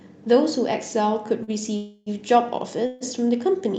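At 1.43 s there's a short stall from a late packet. A packet showed up behind schedule, the jitter buffer ran dry, and the receiver stretched the last bit of sound for about 41 ms, a held moment with a slight buzz or dip. Nothing was lost; it just resumed where it left off.

Then come two call audio freezes, at 1.76 to 2.09 s (about 300 ms) and 2.86 to 3.04 s (about 142 ms). The sound hangs as a fading buzz or hiss without dropping to silence, then carries on from the same spot, so everything after is pushed later. The likely cause is packets held up in transit, emptying the buffer. The call codec's top end stopping around 8 kHz is just the normal call path.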